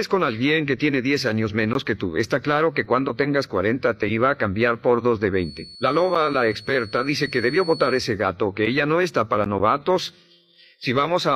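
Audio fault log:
5.30–8.16 s, feedback whistle: a thin, steady tone at 4.4 kHz sits roughly 20 dB below the sound and swells and fades slowly in level. The likely cause is a loudspeaker-to-microphone loop held just short of oscillation, sustaining that one frequency without escalating.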